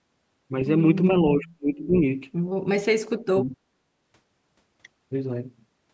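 From 1.32 to 1.95 s and again from 2.84 to 3.56 s, the speech sinks by about 35 and 40 dB at its deepest. This is likely speech suppressed in double talk: an echo canceller mistook overlapping talk for echo and turned it down. The waveform thins to near-flat stretches, and the spectrogram shows dark vertical gaps below the call path's 8 kHz ceiling.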